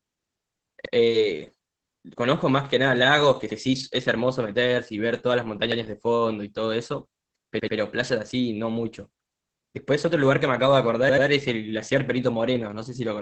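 Throughout, the speech carries heavy Opus voice compression in its SILK speech mode: the band stops near 8 kHz and the excitation is coarsely coded, giving a muffled, hoarse, faintly robotic quality that fits a low bitrate around 10 kbps.

A repeated buffer occurs at 3.50 s and 5.72 s, each replaying an 85 ms chunk once, and at 7.60 s, where it plays twice more, lasting to 7.77 s. Each is a stutter with hard joins; the length fits a 4096-sample buffer, and nothing is skipped.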